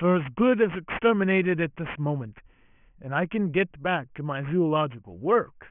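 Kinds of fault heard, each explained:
Aliasing, throughout the clip: the speech was resampled to a lower rate without an anti-aliasing filter, so energy above the new band edge at 3 kHz folds back below it as false, unrelated frequencies. The result points to a drop from a 24 kHz rate to 6 kHz. Sibilants come out gritty and metallic, the spectrum runs hard up to 3 kHz, and the folded components sit fairly high, roughly 15 dB below the speech.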